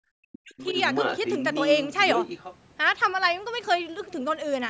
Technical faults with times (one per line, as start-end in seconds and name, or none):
0.17-0.76 speech suppressed in double talk
0.58-2.56 other side's voice leaking through